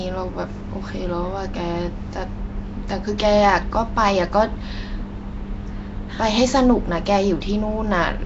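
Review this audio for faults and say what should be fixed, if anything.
Nellymoser compression runs throughout the clip: the speech carries a rough, hissy halo and a smeared, underwater quality, and nothing is heard above about 7.7 kHz. The likely cause is Flash's Nellymoser Asao codec, which codes 256-sample blocks at a fixed two bits per sample. Weaker bands get no bits and are refilled with noise, producing the hiss and smear. The damage is plainly audible and fits a rate around 32 kbps. To prevent it, capture and deliver the audio with a modern speech codec such as Opus, or keep an uncompressed original.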